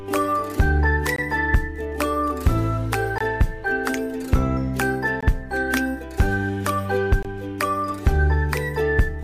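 A gap between chunks breaks the sound four times, at 1.16–1.18 s, 3.18–3.21 s, 5.21–5.23 s and 7.23–7.25 s. Each hole lasts about 21 ms and recurs every 2.0 s, so the audio was delivered in 2-second chunks with silence inserted at each join. Nothing is lost, but each gap sounds like a brief, hard-edged dropout. On a waveform each appears as a flat, near-silent stretch with abrupt edges, and on a spectrogram as a thin, blank vertical stripe.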